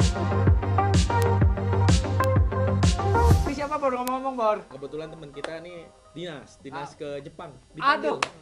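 Bit error spikes occur at 1.22 s, 2.24 s and 4.08 s, each a single sharp broadband tick unrelated to the sound. A flipped bit throws one or two samples up by a power of two, peaking near about -7 dBFS, then about -1 dBFS at 4.08 s.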